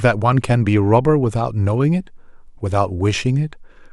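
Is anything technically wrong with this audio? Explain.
No, nothing technically wrong turns up in this bit of speech; it all sounds fine to me.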